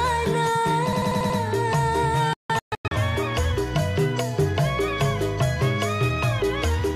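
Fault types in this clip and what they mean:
System hang loop: The audio path stalled while the hardware kept replaying one buffer. From 0.93 to 1.39 s, a 93 ms slice repeats five times at 10.8 Hz, giving a stuttering rattle. The loop length fits a 4096-sample buffer.
Digital broadcast dropout: The receiver lost valid frames and muted until good ones returned. Between 2.33 and 2.92 s the sound drops out in several short holes, each with a 3 ms fade. They total 416 ms across 576 ms, the longest lasting 160 ms.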